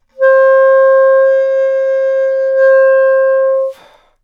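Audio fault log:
Nothing stood out on listening; no problem could be heard anywhere in the sound.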